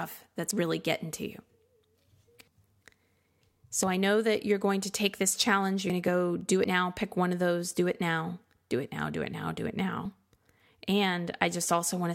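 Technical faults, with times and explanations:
0.51, 3.83, 5.90, 6.64 and 10.05 s, dropped buffer (overrun): the speech jumps ahead with no gap, losing roughly 20 to 70 ms each time, likely because samples were overwritten before being read.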